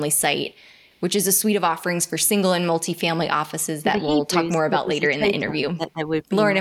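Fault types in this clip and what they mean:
Echo leak: a faint delayed copy of the speech, about 40 dB below it and arriving roughly 317 ms late, is heard from 0.89 to 0.98 s. The likely cause is a far-end echo canceller leaving residue. On a spectrogram it shows as a weak, brief smear repeating earlier harmonics.
Speech suppressed in double talk: between 3.78 and 6.04 s the speech dips in level by as much as about 15 dB, for roughly one and a half seconds in total. This is likely an echo canceller turning the talker down during overlap. The waveform envelope visibly sags in patches.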